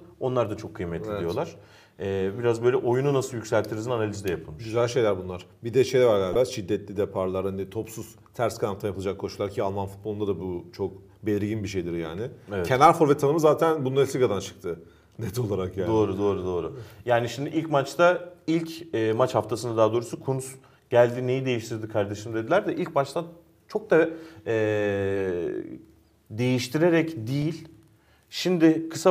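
Damaged data in a compressed stream produces brief glitches at 6.32–6.35 s and 27.42 s. Corrupted frames throw the decoder off until it resyncs.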